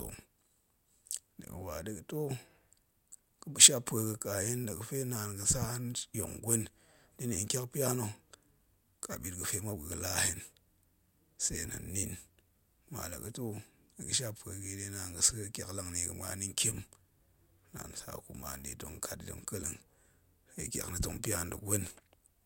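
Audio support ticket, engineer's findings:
Speech signal checked across the full clip: no audible faults found in capture, transport or playback chain; no action required.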